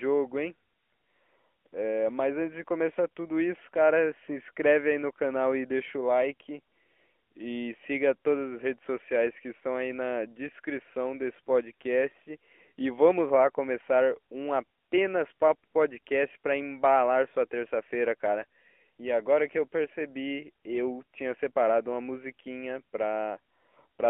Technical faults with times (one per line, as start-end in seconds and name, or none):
0.00-24.09 AMR narrowband mobile codec